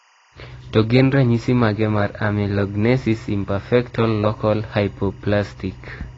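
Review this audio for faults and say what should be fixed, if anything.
Timecode bleed runs through the whole speech clip: a faint chirping warble, roughly 35 dB under the voice, flipping between about 1 and 2 kHz, which fits 23.976 fps linear timecode leaking in from a neighbouring track or cable.

The speech also sounds dull and smeared all the way through, with nothing above 7.9 kHz and a warbly, fizzy edge on sustained sounds and sibilants. That's likely AAC compression at a low bitrate, around 24 kbps, where the encoder drops the top end and quantises the rest coarsely.

To prevent both, keep timecode lines physically separated from audio (or re-record), and export from the uncompressed master at a much higher AAC bitrate.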